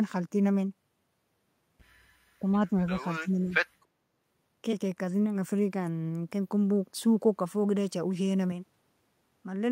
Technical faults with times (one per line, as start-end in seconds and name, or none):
2.40-2.47 speech suppressed in double talk
2.97-3.54 speech suppressed in double talk
8.52-9.72 input switched to a poorer device